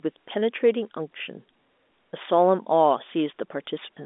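No technical faults can be heard in this speech recording. It comes over a normally working G.711 telephone line, so the sound is limited to roughly 250 Hz to 3.6 kHz with nothing above 3.8 kHz, and any quantisation noise from the coding is faint at most.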